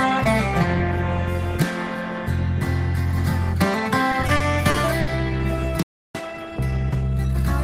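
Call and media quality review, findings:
Repeated stalls (stutter), 4.11–5.09 s: six brief hitches, longest about 70 ms, roughly 180 ms stretched in total. Jitter buffer underrun from late packets, with concealment extending prior sound. Spectrogram shows smeared, repeated frames; the waveform has no true dropouts.

Playback stall, 5.83–6.15 s: output drops to silence for about 320 ms mid-flow, then resumes. Likely player starvation or a blocked audio thread. The waveform shows a flat silent gap and the spectrogram a clean vertical blank band.

Time-compressed catch-up, 6.15–7.41 s: audio runs hurried at about 1.25x with pitch unchanged. The player is draining its backlog by splicing out short segments. The spectrogram shows compressed events and small crossfade seams at normal harmonic spacing.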